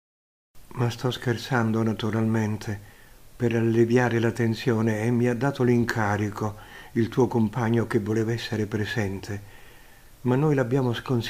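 No technical faults are audible.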